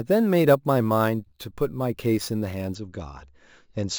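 From 0.0 to 2.75 s the speech carries imaging from sample-and-hold upsampling. Samples were repeated without smoothing, pointing to a 16 kHz source, leaving mirrored copies from 8 to 16 kHz about 24 dB down. Unlike steady hiss, this metallic fizz tracks the speech and moves against its pitch.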